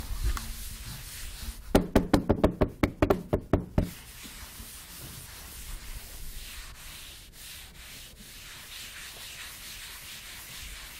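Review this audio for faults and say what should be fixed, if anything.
Damaged data in a compressed stream appears twice, as a brief blip at 0.35 s and again at 3.09 s. At each point part of the encoded stream was corrupted, so the decoder misread the affected frames, lost its place in the bitstream and had to search forward for the next valid frame header. To prevent it, verify stream integrity with checksums and re-fetch or discard corrupted frames before decoding.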